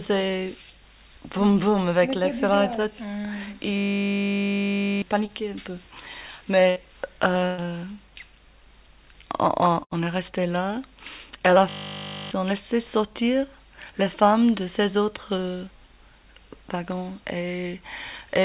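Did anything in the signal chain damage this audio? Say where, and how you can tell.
Yes. From 3.78 to 5.02 s and again from 11.69 to 12.31 s there's a steady 50 Hz buzz, a 20 ms piece repeating exactly. That's a system hang loop: the driver or buffer stage froze while the hardware kept replaying its ring buffer, losing about one and a half seconds and then under a second of audio.

At 5.26 s there's a tiny smear lasting about 15 ms. This is short concealed packet loss on the network stage: a few hundredths of a second of audio arrived too late, and the decoder bridged the gap by extending the preceding sound before blending back in.

At 6.70, 7.46 and 9.84 s the sound holds or fades briefly, then jumps ahead, with about 60, 120 and 80 ms missing. Each is a burst of packet loss: consecutive packets were lost, and concealment stretched and faded the last sound across the gap.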